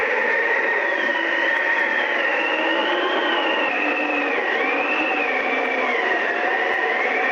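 The audio carries no audible technical faults at any point, with its level, continuity and frequency content holding steady throughout.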